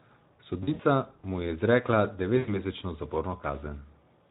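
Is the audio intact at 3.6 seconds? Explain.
No, at 3.6 s you're hearing the Speex codec damage that runs through the whole clip. This CELP speech codec has too few bits for the excitation, so the speech comes out noisy and hoarse, which fits a setting around 11 kbps.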